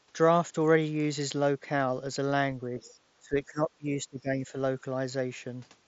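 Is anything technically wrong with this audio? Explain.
Yes, there are two echo-control problems in this speech clip, which passes through a Bluetooth mSBC headset link with nothing above about 7.7 kHz.

Speech suppressed in double talk occurs at 2.7–2.9 s and again at 3.19–4.53 s. With both sides likely talking at once, the echo canceller couldn't separate the talker from loudspeaker echo and pulled everything down. The first dip is brief and about 10 dB deep. The second lasts around a second and drops by about 20 dB.

The other side's voice leaking through appears at 2.8–2.95 s, overlapping the first dip. Residual loudspeaker sound likely slipped past the echo canceller into the microphone. It sits very faint, roughly 30 dB below the speech, as a short scrap.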